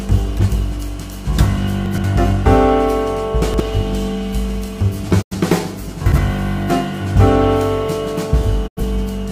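At 1.86 to 2.04 s and again at 3.42 to 3.60 s there are chunks out of order. A 60 ms block of audio is delivered two blocks late, so it plays after material that should follow it. Nothing goes missing, but each span becomes a brief jumbled stutter, with hard joins where unrelated waveforms meet.

At 5.21 to 5.35 s a digital broadcast dropout occurs. The receiver rejects or loses data and mutes, fading out over about 20 ms. About 85 ms of programme is gone, which fits two lost frames of roughly 43 ms each, and the sound resumes further along.

At 6.06 to 6.18 s the chunk reordering recurs. Here a single 60 ms block arrives one position late, giving a shorter scrambled moment.

At 8.66 to 8.81 s a second broadcast dropout produces the same brief fade into silence, again losing about 85 ms before the signal returns.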